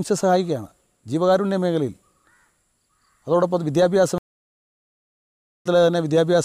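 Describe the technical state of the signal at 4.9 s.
At 4.9 s you're in the dead gap of a stream reconnect, silent from 4.18 to 5.67 s. The player dropped the connection and restarted its decoder, picking up about 0.4 s further on.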